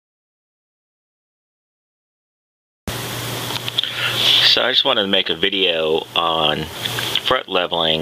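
Gain pumping throughout: the gain ducks about 30 dB under loud sounds, likely excess gain into a fast limiter. A gate would silence gaps.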